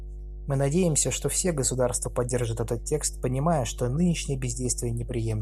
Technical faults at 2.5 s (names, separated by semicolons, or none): mains hum